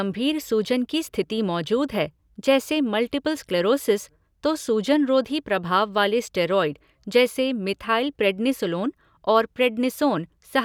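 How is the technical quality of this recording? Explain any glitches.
Nothing in this recording jumps out as a glitch, so there's nothing here to explain.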